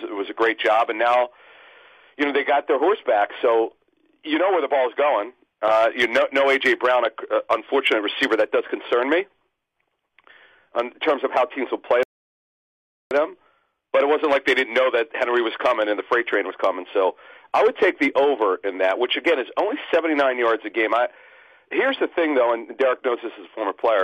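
At about 12.03 s there's a rebuffering stall: the player ran dry of downloaded audio and just waited. You get roughly 1.08 s of dead silence until 13.11 s, then the sound picks up exactly where it left off. Nothing's missing, but about a second of extra time gets added.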